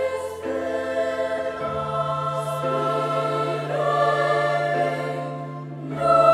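No technical fault can be heard anywhere in this audio. Nothing in it calls for a timestamp or a fix.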